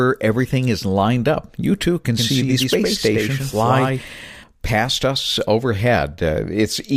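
A second, out-of-step copy of the same speech was likely mixed in, most plausibly from a slower capture path or an edit holding two versions, giving a doubled audio track from 2.17 s to 4.43 s. The copy trails by about a tenth of a second at around 5 dB below the original, full-band and dry, so each syllable gets a hard slap-back with no room decay. It switches on and off abruptly at both ends.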